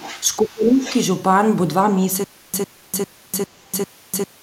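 From 0.00 to 0.23 s, the other side's voice leaks through, about 20 dB below the speech. An echo canceller likely left loudspeaker echo in the microphone.

From 0.42 to 0.87 s, speech is suppressed in double talk. The voice dips by around 20 dB for roughly 0.4 s, likely because the canceller turned down its own talker along with the echo.

From 2.24 s to the end, there is a stutter with silent gaps. A 102 ms burst repeats five times, every 0.40 s, with 0.30 s of digital silence between. A stalled stream likely replayed its last fragment.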